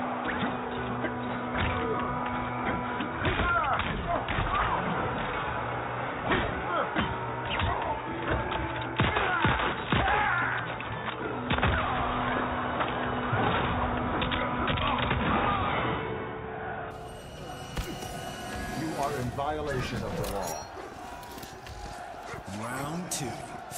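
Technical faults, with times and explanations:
0.0–16.91 s, input switched to a poorer device: the sound is dull and boxy, with nothing above 3.8 kHz and a faint extra noise floor, then opens up at 16.91 s with no gap or level jump. Likely a narrower-band mic or headset profile.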